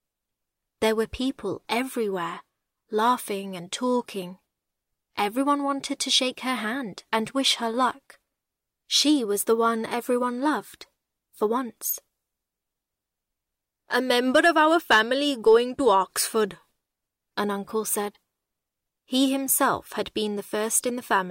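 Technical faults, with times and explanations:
15.47–15.97 s and 20.76 s, hard clipping: the signal runs a little past what the chain can pass, by about 1 dB over that first half-second and about 2 dB in the brief hit at 20.76 s, so the peak tops get sliced flat. Those squared-off tops throw extra harmonics high up the spectrum. With overdrive this mild you won't hear a broad fuzz, just a slight crackly edge riding on the loudest moments.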